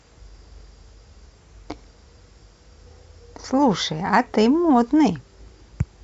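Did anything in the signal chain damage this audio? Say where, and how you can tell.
No, nothing along the chain left a mark on this speech that I can hear, so there's no stage to point to.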